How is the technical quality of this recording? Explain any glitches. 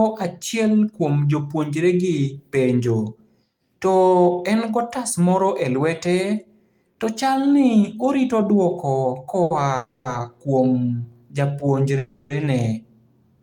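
The recording has three network-related glitches in the speech, all in its second half: one short stall from a late packet and two longer call audio freezes.

At 9.43 to 9.52 s, a short stall from a late packet occurs. One packet arrived late, the jitter buffer emptied, and the receiver held the last sound for about 70 ms until it came. Nothing is lost, but a sound drags on with a faint buzz or dip and everything after it runs 70 ms later.

The two call audio freezes fall at 9.76 to 10.07 s and 11.98 to 12.32 s. The likely cause is packets held up in transit, draining the jitter buffer for 290 ms and then 320 ms. The receiver fills each gap by extending the last sound as a fading buzz or hiss that never reaches silence. The speech then resumes where it stopped, with nothing missing but each pause adding delay.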